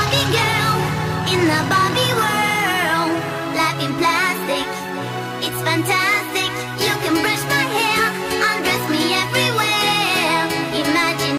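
Hard clipping runs through the whole clip. The signal arrives about 8 dB hotter than the stage can pass. Each peak that crosses the limit is cut flat. Around two percent of the samples are affected. The flat tops add harmonics high in the spectrum. The result is a harsh crackle on the loudest moments. Quieter passages stay below the limit and escape it.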